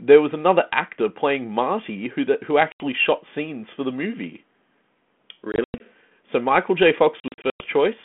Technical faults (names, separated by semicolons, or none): packet loss on an ADPCM call